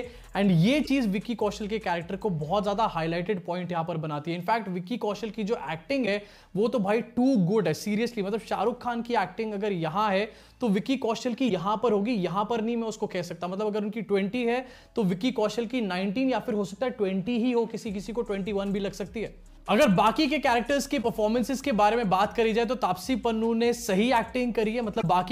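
Damaged data in a compressed stream causes brief blips of about 56 ms at 0.82, 6.02, 11.46, 20.99 and 24.99 s. The decoder misreads the corrupted frames and resyncs.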